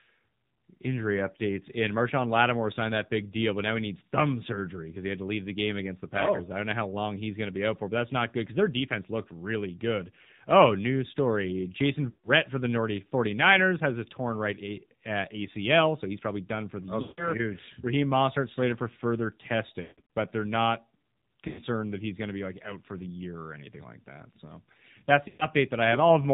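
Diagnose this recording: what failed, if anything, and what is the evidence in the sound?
The codec stage failed: the speech was coded with the AMR narrowband mobile codec at a low rate, which fits a 7.4 kbps mode. Nothing above 4 kHz survives, and the voice sounds plainly buzzy and synthetic.

The radio link also failed, causing lost AMR speech frames at 12.10, 17.02, 19.82 (after "slated for further"), 21.48 and 25.28 s. The decoder stretched the last sound and faded it for 0.1 to 0.16 s each time.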